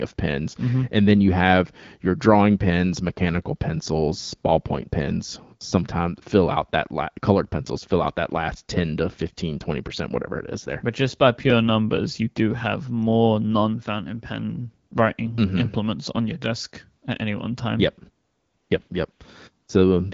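AMR comfort noise appears at 14.89 s, 18.25 to 18.69 s, 18.87 s, 19.11 to 19.19 s and 19.65 s. Each time, the speech frames stop and the receiver fills the gap with smooth synthetic noise, so the real background drops out and flickers back.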